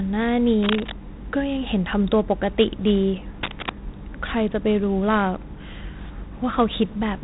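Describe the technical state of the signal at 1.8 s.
At 1.8 s the speech carries a gritty hiss that rises and falls with its level, with roughness on sharp onsets, and nothing above 3.8 kHz, which fits 4-bit ADPCM compression at 32 kbps, present throughout the clip. Each sample is coded as a coarse 4-bit step from a prediction, leaving level-following noise and smeared attacks, while the low sample rate removes the top band.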